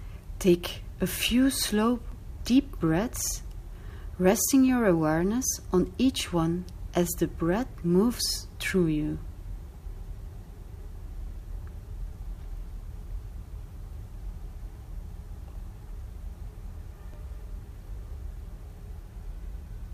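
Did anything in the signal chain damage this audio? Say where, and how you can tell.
Yes. At 2.12 s there is a brief click where about 6.5 ms of audio plays twice: overlapping chunks at a buffer or chunked-processing stage. The pattern points to 5.0 s blocks, each starting slightly before the previous one ended, so the join duplicates a sliver.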